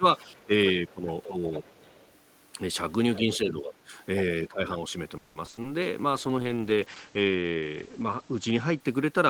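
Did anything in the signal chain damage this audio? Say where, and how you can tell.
Yes. The speech dips and thins in short bursts at 0.00–0.05, 0.25–0.52, 0.73–1.07, 1.27–1.51, 3.23–3.94 and 4.48–4.83 s, sinking by up to about 15 dB. This is speech suppressed in double talk, most likely in call processing: the echo canceller ducked the talker while the far end also spoke.

From 1.23 to 2.17 s a faint second voice sits under the talker, around 20 dB down. This is the other side's voice leaking through, likely in call processing: the far end played on a loudspeaker, and the echo canceller left a residue of it in the microphone signal.

Between 5.17 and 5.66 s the sound turns choppy and robotic, with five holes, the longest about 180 ms, and over half the stretch patched over. This is repeated packet loss at the network stage, with each gap filled by stretching the previous sound.

From 6.12 to 9.22 s the speech goes muffled and rough, with nothing above 8 kHz. 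This is a call bitrate drop at the codec stage. It fits the encoder falling from about 32 to 11 kbps and coding more coarsely, with bandwidth cut to save bits.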